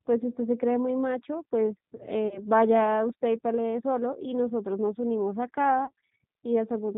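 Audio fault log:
Throughout: G.729 codec, plainly rough and synthetic speech with nothing above 4 kHz, since the voice is rebuilt from a filter, pitch predictor and few pulses, which fits an 8 kbit/s stream.
2.28–2.40 s and 5.85–5.91 s: VoIP packet loss concealed by the speech codec, a brief stretched smear fading out as about 30 ms of lost audio is extrapolated, with weak recovery afterwards.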